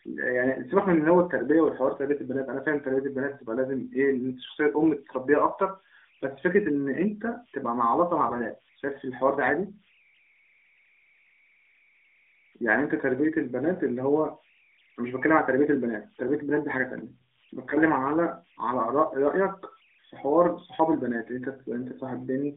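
Converter idle tones run through the whole recording: a faint whistle around 2 kHz, sitting about 37 dB below the speech. It comes from a delta-sigma converter working without dither. When its input gets very small, the modulator falls into repeating bit patterns, and those cycles turn into a steady tone. That tone stands out in the pauses and leaves a grainy edge under the quieter passages.

AMR bit errors hit from 8.26 to 8.47 s, and the voice briefly turns hoarse, scratchy and gargly while keeping roughly its pitch and loudness. Over that fifth of a second, seven frames of the mobile speech codec arrived with flipped bits in their less protected fields. They were still decoded as valid, so pulse positions and fine gain and spectral values came out wrong. The narrowband AMR path itself, heard as the 250 Hz to 3.6 kHz telephone band, sounds only lightly coloured around it.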